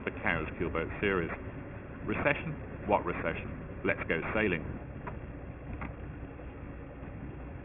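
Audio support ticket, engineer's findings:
Aliasing throughout: gritty, metallic top end, band stops hard near 3 kHz. Fits downsampling to 6 kHz without anti-alias filtering; content above the fold mirrors back fairly strongly.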